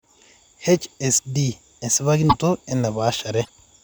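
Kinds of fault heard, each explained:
Broken MP3 bit reservoir: brief glitches at 2.29 s and 3.44 s, each about two 26 ms frames long, likely from cut frames reading another frame's bytes.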